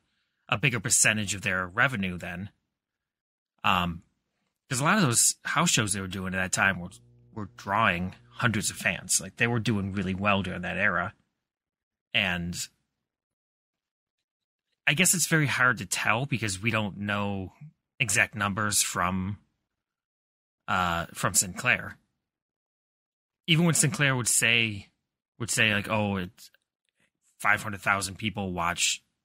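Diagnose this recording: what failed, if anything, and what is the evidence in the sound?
Mains hum entered at the analogue wiring stage. From 6.51 to 8.87 s a steady 60 Hz tone sits roughly 30 dB under the speech. A ground loop or nearby transformer coupled the power line into the signal. A spectrogram shows a flat horizontal line at 60 Hz across that span.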